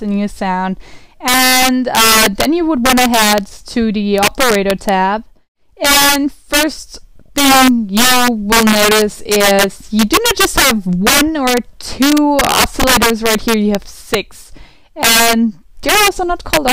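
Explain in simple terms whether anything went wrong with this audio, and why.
Something did go wrong: integer overflow runs throughout the clip. On the loudest moments, the level went past the largest number the system could store and wrapped to the opposite extreme instead of stopping. That gives sudden violent cracks on a few percent of the sound, far harsher than the flattened buzz of ordinary clipping.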